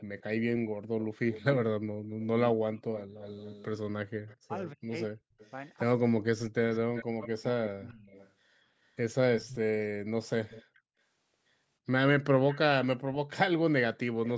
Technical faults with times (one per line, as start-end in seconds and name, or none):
0.00-4.36 echo leak
4.34-6.90 speech suppressed in double talk
5.39-5.50 echo leak
6.73-8.31 echo leak
9.37-9.56 echo leak
10.49-10.63 echo leak
12.48-12.59 echo leak